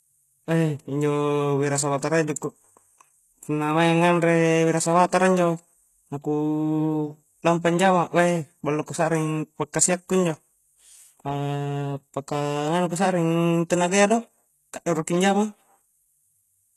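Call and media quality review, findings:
Gritty, metallic, lispy s sounds throughout the speech; treble extended but synthetic, nothing above 12.3 kHz. Likely HE-AAC compression: spectral band replication copying lower bands upward, harmonics misaligned at crossover; damage level fits a bitrate near 16 kbps.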